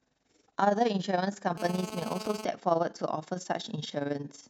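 From start to finish the speech carries overlap-add ripple: the level swells and dips by about 11 dB around 20 times a second, giving a fast flutter. It comes from the audio having been split into windowed frames and rejoined with an overlap whose windows don't add up to a flat gain, so each frame boundary leaves a dip. Unlike a deliberate tremolo or a codec warble, the rate stays locked to the frame rate.

From 1.58 to 2.45 s a GSM phone buzz sits on top, roughly 10 dB below the speech. A 2G handset on a call was transmitting in bursts at 217 Hz, and the audio circuitry rectified those radio pulses into a hard, raspy tone rich in harmonics. Two things separate it from mains hum: its pitch is 217 Hz rather than 50 or 60 Hz, and its edge is buzzy rather than smooth. It holds nearly steady, as a call does, and ignores the speech beneath it.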